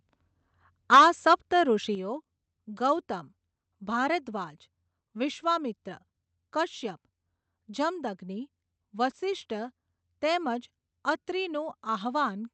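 A speech recording with harsh, crackling flattened peaks from 0.92 to 1.05 s (about 8 dB over, roughly a third of samples cut) and from 1.31 to 1.34 s (about 3 dB over): microphone overload, likely from excessive input gain. Unlike codec grit, this distortion sits only on the loudest moments. Microphone volume stepped down appears as sudden level drops at 0.95 s (about 2 dB) and 1.95 s (about 6 dB), where voice and background fall together. This separates it from a speaker moving away from the microphone. Both happen while the sound passes through an Opus call path at roughly 40 kbps with audio extending to 8 kHz.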